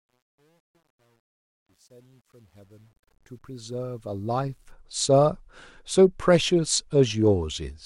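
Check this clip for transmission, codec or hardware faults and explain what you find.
One fault shows up, on the fade-in at the start of the speech.

Truncation distortion on a fade runs from 0.0 to 4.72 s, heaviest from 0.0 to 3.34 s. The gain stage behind it dropped low-order bits without dither, and the coarseness fits roughly 10-bit resolution. At the quietest levels the waveform collapses into a few square steps, so the opening sounds gritty before smoothing as the level climbs.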